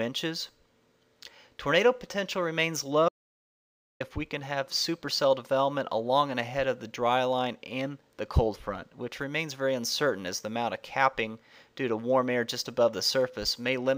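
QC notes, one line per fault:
3.09–4.00 s: audio dropout to silence. Sound cuts to dead silence for 0.92 s, with no room tone. The input was likely lost mid-recording.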